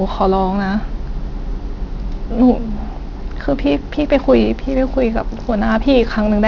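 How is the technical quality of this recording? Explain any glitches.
The recording has a clear technical flaw throughout: aliasing. Across the whole clip, the speech was downsampled without an anti-aliasing filter, which fits a drop to a 12 kHz rate. Content above 6 kHz folds back below it, roughly 30 dB under the speech, leaving sibilants gritty and metallic. On a spectrogram, energy runs hard up to a sharp 6 kHz ceiling, with mirrored, unrelated streaks descending from it.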